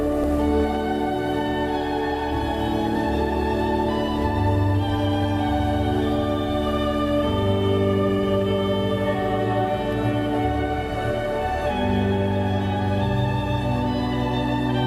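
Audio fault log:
No faults logged for this clip.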